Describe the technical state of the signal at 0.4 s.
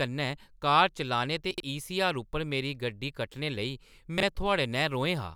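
At 0.4 s the signal is intact, with no audible technical fault at that moment.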